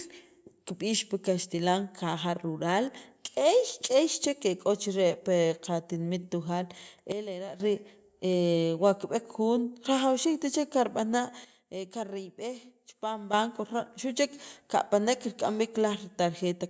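At 7.12 s the speech and its background noise drop together by about 11 dB in a single step, staying down until 7.6 s, then returning just as abruptly. A second sudden gain jump, about 10 dB down, runs from 11.45 s to 13.33 s. Neither change is ramped, which points to a likely digital gain setting or bit shift applied between adjacent samples. The band-limited call microphone sound, with nothing above 8 kHz, carries through both steps.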